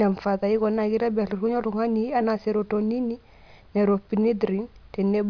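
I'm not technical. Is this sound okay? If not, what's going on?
Yes, no technical problems can be heard here.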